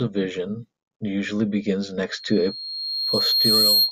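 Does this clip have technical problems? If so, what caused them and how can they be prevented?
Yes. Loudspeaker feedback squeal starts at 2.11 s and runs to the end at 3.92 s: a 4.2 kHz tone swells over about a second and a half to roughly 5 dB above the speech, because the microphone re-captures its own loudspeaker output. Lowering gain or repositioning the microphone away from the speaker prevents it.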